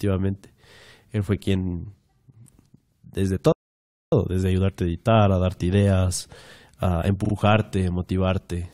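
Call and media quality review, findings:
Playback stall, 3.52–4.12 s: speech cuts out for about 0.6 s, then resumes at "desde ayudarte a editar". Likely player buffer underrun or blocked output thread. Waveform flat and silent; spectrogram shows a blank vertical band.

Repeated frames, 7.24–7.33 s, after "a darte ideas a": stutter as a ~43 ms block replays twice, adding about 85 ms. Fits duplicated codec frames in write/transport. Spectrogram shows identical short patterns side by side.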